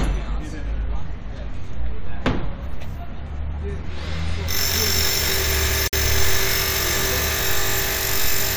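Two separately encoded pieces were joined without trimming the encoder's start delay and end padding, leaving a gap at the join of encoded pieces. At 5.88 s the sound drops out for about 53 ms, with smeared edges, then resumes where it stopped.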